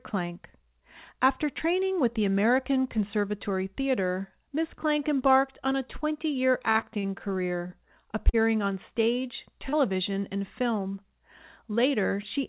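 Repeated packet loss (robotic sound) runs from 6.72 to 7.06 s. Four gaps, the longest 35 ms, were patched by extending the previous sound, leaving the speech choppy with about 40 ms missing.

A short stall from a late packet follows at 7.67 s. The jitter buffer ran dry, so the last sound was held about 28 ms longer before the speech resumed intact.

Short concealed packet loss occurs at 8.29 to 8.36 s and 9.69 to 9.75 s. Each time about 40 ms was lost and filled by continuing the preceding sound, heard as a brief smear or wobble.

Throughout, nothing is heard above 4 kHz, which points to a G.711 mu-law call path at 64 kbps.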